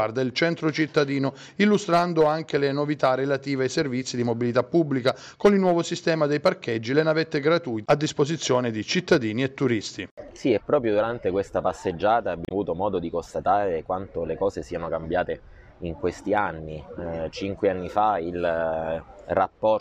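At about 12.45 s there's a short burst of damaged data in a compressed stream, lasting roughly 70 ms to 12.52 s. A stretch of the encoded bytes got corrupted, so the decoder couldn't make sense of those frames, lost its place, and had to hunt for the next valid frame header before it could carry on. What you hear is a quick glitch, a chirp, squawk, click or short hole, cutting across the sound at that point, and then things pick up again.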